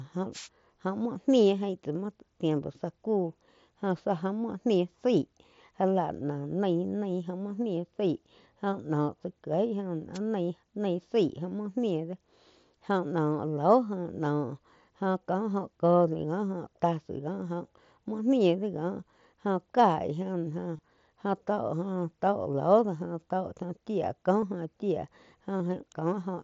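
The radio link of an analogue FM wireless microphone fades as reflections cancel, so receiver noise rises over the speech, giving wireless microphone noise hits from 0.32 to 0.49 s and 10.13 to 10.19 s, each a brief swish of static.

Voice packets between Bluetooth headset and phone go missing and the receiver fills each gap by repeating the best-matching recent waveform. This concealed Bluetooth headset packet loss occurs at 1.05 s (7.5 ms), 20.77 to 20.79 s (22.5 ms), 24.41 s and 25.59 s (15 ms each). The single short gap is nearly hidden, and the longest gives a brief buzzy hold with a slight warble as real sound resumes. The mSBC wideband link carries speech up to 8 kHz with light grainy texture.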